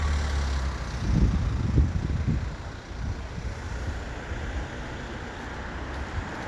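Nothing goes wrong in this one: the sound just runs along from beginning to end without a single technical hiccup to point out.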